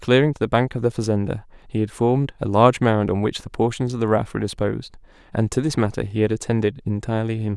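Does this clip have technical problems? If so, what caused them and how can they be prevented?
No, nothing in this speech recording indicates a technical fault, so there is no cause to trace or prevent.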